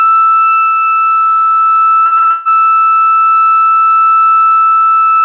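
Repeated packet loss (robotic sound) from 2.06 to 2.66 s: six gaps, longest 147 ms, are patched by stretching the preceding sound, making the music choppy with pieces missing.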